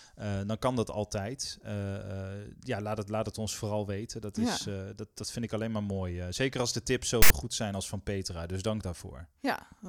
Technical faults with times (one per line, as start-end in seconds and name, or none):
7.22-7.30 file tags played as audio